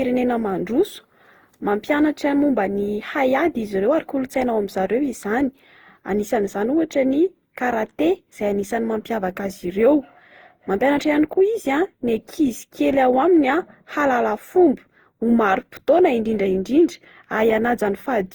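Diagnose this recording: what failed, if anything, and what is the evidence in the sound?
The fault sits at the codec stage and runs through the whole speech clip. The sound is swirly and hollow, with smeared, blurred consonant attacks and a build-up of noise and spectral gaps well beyond what a single encode at this quality would leave. Content extends to about 20.2 kHz, consistent with Opus at around 48 kbit/s. The likely cause is generation loss: roughly ten successive decode-and-re-encode passes, each requantising on a shifted frame grid so the errors accumulate.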